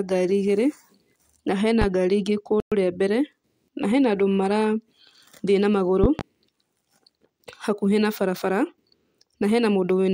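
A sudden electrical pulse, likely from a plug, a switch or a static discharge, enters the signal at 1.82 to 1.85 s and produces a single loud pop about 15 dB above the speech. The sharp transient sits on top of the talking, which carries on beneath it. At 2.60 to 2.72 s, a Bluetooth stall, likely caused by radio interference delaying packets until the headphone buffer ran empty, cuts the speech to silence for 116 ms before playback resumes. A second loud pop at 6.04 to 6.23 s, again likely a voltage step or glitch reaching the output, arrives as two sharp thumps in quick succession, peaking about 15 dB above the speech, with the speech still running underneath.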